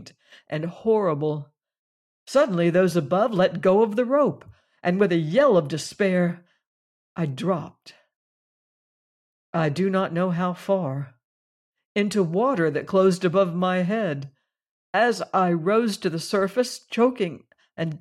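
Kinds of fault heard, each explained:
Nothing here calls for a fault line: listening across the speech, no technical problem stands out.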